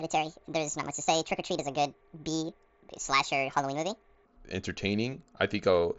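Speech, with its first 4.25 s (0.0 to 4.25 s) as a section at the wrong speed, running 1.64 times fast, likely from being fitted to the wrong clock. Pitch rises by nearly an octave and pace hurries together, unlike a pitch shift that keeps timing. The mSBC Bluetooth band limit near 7.7 kHz stays throughout.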